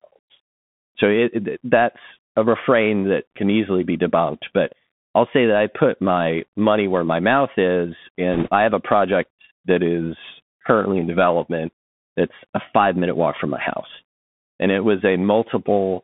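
All the way through, the speech sits inside a Bluetooth CVSD headset codec. The band runs only from about 150 Hz to 3.5 kHz, and the one-bit delta coding, which fits a 64 kbps link, leaves a granular hiss underneath, scratchy s sounds, and rough edges wherever loud bright sounds outrun the adapting step size.

Then from 8.33 to 8.49 s, right after "where my mouth is" and before "I have a project", there's a burst of bit errors on the Bluetooth voice link. At a few percent of bits flipped, you get a short rushing crackle rather than sharp clicks, because each wrong bit only nudges the waveform a small step.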